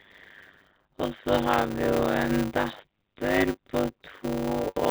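Speech runs through the whole clip with a steady buzz at 100 Hz. The cause is a block size mismatch (padded). Each short block, which fits 256-sample writes, is followed by zeros, so the audio plays at about 0.53 times normal speed with timbre unchanged. The telephone band of the G.711 coding stops at 4 kHz.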